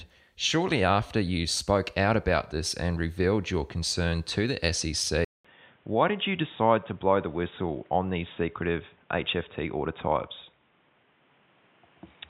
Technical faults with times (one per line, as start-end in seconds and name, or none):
5.25-12.29 input switched to a poorer device